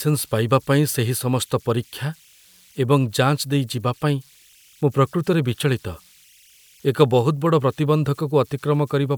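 A faint, steady whistle around 3 kHz runs through the whole of this speech recording, most exposed in the pauses, with a gritty, grainy texture under the quieter passages, sitting about 36 dB below the speech. These are converter idle tones: an undithered delta-sigma converter, fed only a very small input, settles into repeating bit patterns, and those cycles emerge as audible tones whose pitch follows the small offset at its input.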